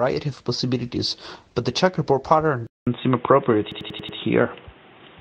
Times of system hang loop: 3.72-4.18

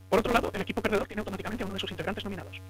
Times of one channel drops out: 0.98-1.17

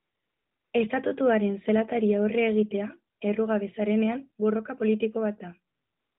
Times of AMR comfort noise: 0.00-0.74, 3.16-3.20, 5.74-6.19

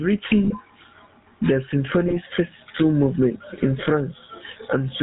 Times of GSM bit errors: 0.45-0.53, 2.08-2.17

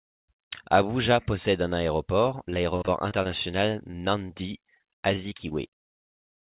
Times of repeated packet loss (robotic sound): 2.50-3.27, 3.91-5.52

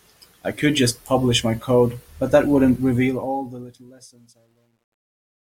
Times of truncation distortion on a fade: 2.95-5.56

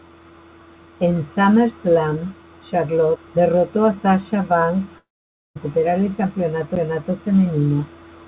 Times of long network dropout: 4.98-5.57

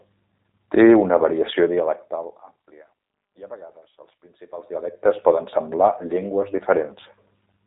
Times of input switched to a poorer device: none

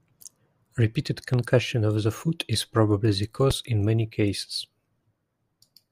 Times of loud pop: 1.34-1.36, 3.51-3.53

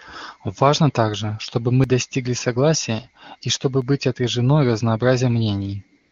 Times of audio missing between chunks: 1.84, 3.82

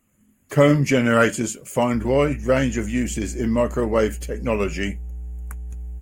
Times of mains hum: 1.92-6.02

